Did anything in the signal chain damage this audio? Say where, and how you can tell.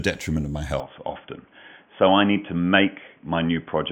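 Yes. From 0.8 s to the end, the speech abruptly turns narrow and boxy, with nothing above 3.4 kHz, which points to an input switched to a poorer device, most likely a change at the driver or device stage to another microphone or a headset call profile. On a spectrogram, the upper bands cut off sharply at 0.8 s and a faint new noise floor appears, roughly 40 dB below the speech. The waveform shows no gap at the switch and no obvious level jump.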